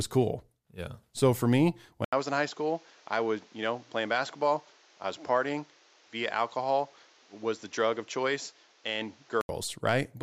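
A speech recording that goes dull and boxy at 2.05 s, after a brief gap of about 80 ms, and stays that way until 9.49 s. In that stretch nothing is heard above 7.6 kHz, the level falls by a few decibels, and a new background noise sits roughly 30 dB under the speech. The likely cause is an input switched to a poorer device with narrower bandwidth and its own noise floor, before the original input returns.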